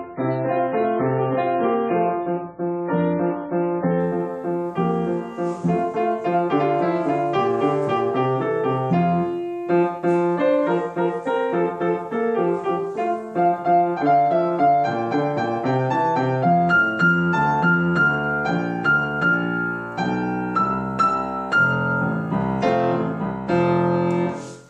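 For the first 4.0 seconds the audio has an adaptive stream starting at a low bitrate: nothing sounds above about 4.5 kHz, and codec artefacts are heavy, which fits a very low rate of around 16 kbit/s MP3. At 4.0 s the player switches to a better rendition, consistent with 128 kbit/s, and the treble returns abruptly with no gap or stutter. A fixed low-pass filter would stay dull throughout, and a mid-stream bandwidth drop would degrade later, but this improves once, right at the start.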